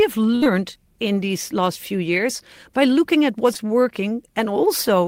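From 0.35 to 0.44 s, a burst of packet loss removes about 60 ms. The receiver holds the last sound and fades it, then jumps ahead.

Right after, from 0.44 to 0.47 s, a short concealed packet loss covers a 16 ms gap. It is patched with continued sound, heard as a brief smear.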